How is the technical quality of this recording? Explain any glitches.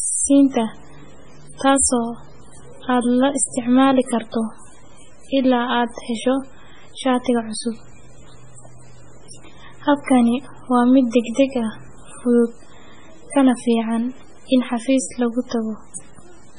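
The quality is poor. Heavy compression damage runs through the whole speech recording.

MP3 compression is the likely cause. Nothing is present above 10.4 kHz, so the top end sounds dull. The encoder had very few bits, which fits a rate near 16 kbps. It discarded the treble at a fixed cut-off and zeroed the weaker frequency lines. Those lines flicker on and off between frames. The result is a watery, swirling texture, with chirpy s sounds and smeared consonant attacks.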